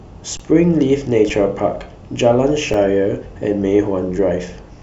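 A speech clip with underruns with held sample. At 0.37 to 0.40 s the waveform freezes flat for about 23 ms (fits a 1024-sample buffer), then at 1.29 s and 2.73 s for about 6 ms each. Audio goes missing each time.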